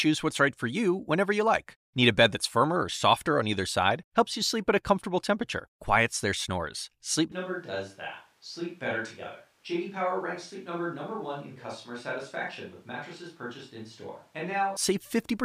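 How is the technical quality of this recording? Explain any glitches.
The recording has one clear fault, a switch to a distant microphone from 7.32 s to 14.76 s. The likely cause is that the close microphone's feed dropped out and a farther pickup took over. At 7.32 s the speech turns abruptly roomy and hollow, loses bass, and falls by roughly 10 dB, while background noise rises to around 35 dB below the speech. At 14.76 s the close sound snaps back just as suddenly.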